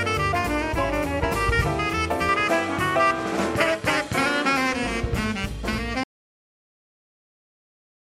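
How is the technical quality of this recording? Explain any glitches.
Two clear glitches mar the recording, one a change in tone and one a loss of signal at the end.

From 2.29 to 4.74 s the sound turns duller and boxy, with nothing above 13 kHz and a new, faint noise floor roughly 45 dB under the signal. The level holds steady and there is no gap at either edge before the brighter tone returns. The likely cause is an input switched to a poorer device, a narrower-band microphone or headset profile briefly taking over the recording path.

At 6.04 s the audio cuts to total silence and stays that way to the end, with no room tone or hiss in the gap. Anything played or said after that point is lost. This is an audio dropout to silence, likely from the input disconnecting or muting while the recorder kept writing silence.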